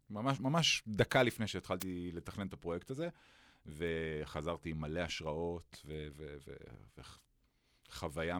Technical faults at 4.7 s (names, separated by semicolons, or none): word clock ticks